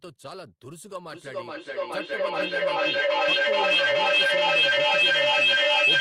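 Feedback echo between two devices from 1.11 s: another device's playback loops into this microphone, repeating roughly every 0.4 s and building to about 16 dB above speech.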